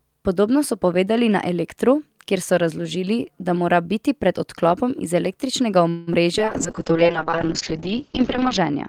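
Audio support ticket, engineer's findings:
Buzzy held tone fading out, 5.89–6.09 s, then speech resumes intact after the pause. Likely call audio freeze: jitter buffer ran dry, receiver stretched last sound for about 178 ms, nothing lost.

Brief smear at 6.13–6.16 s. Short concealed packet loss: about 20 ms never reached the decoder, and the gap was covered by extending prior sound and blending back.

Speech goes rough and muffled from 6.39 s to end. Call bitrate drop: bandwidth estimate fell, and Opus went from 40 to 6 kbps for over 2 s. Top end cut from 20 kHz to 8 kHz.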